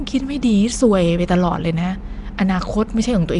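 From start to finish, the speech has a rough, hissy halo around it. Its edges sound smeared and underwater. The codec damage is plainly audible. Nothing reaches above 10.6 kHz. The cause is likely Nellymoser compression, the Asao codec once used for Flash microphones. It codes short blocks with a fixed, small bit budget per sample. Weak bands get no bits and are filled with noise, which produces the hiss. The overall quality fits a rate near 44 kbps.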